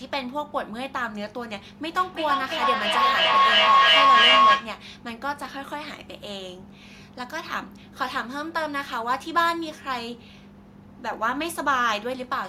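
From 1.98 to 4.81 s there's a feedback howl: two devices sharing the room and call keep feeding each other, gaining on every pass, so a tone around 1 kHz builds up, pulsing roughly every third of a second, peaking about 10 dB over the speech.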